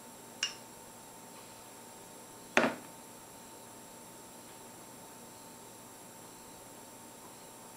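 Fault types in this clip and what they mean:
Compressed frames skipped: jumps at 1.59 s and 4.95 s where the sound skips ahead, as whole 20 ms compressed frames go unplayed.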